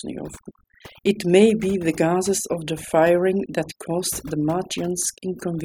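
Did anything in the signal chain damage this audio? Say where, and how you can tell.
Yes. Overdone noise removal at the call-processing stage affects the whole speech clip. Between phrases the background drops to near silence dotted with twinkling specks. A suppressor set too hard pulls individual frequency bands down whenever they come close to its noise estimate, taking the quieter parts of the voice with them. The silenced, speckled gaps set it apart from codec artefacts.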